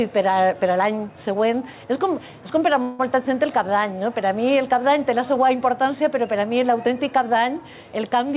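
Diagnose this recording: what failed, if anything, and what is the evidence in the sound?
Gain pumping runs through the whole clip, at the input and call-processing stage. The level ducks by about 5 dB under each loud sound. The likely cause is input gain set far too high, with a fast limiter clamping down on every peak.

A call audio freeze sits at the network and jitter-buffer stage, from 2.82 to 3.01 s. For 169 ms the last sound is stretched into a fading buzz or hiss, band-limited to 4 kHz like the G.711 path. Then the audio resumes where it stopped, with nothing lost but 169 ms added. The likely cause is packets held up in transit, which left the jitter buffer empty.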